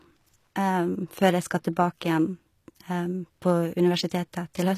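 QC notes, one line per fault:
Throughout: HE-AAC compression, plainly audible in this speech, likely from an encode at about 24 kbps. The treble is rebuilt by copying lower bands upward rather than coded, so s sounds turn gritty and lispy, and nothing reaches past about 14.9 kHz.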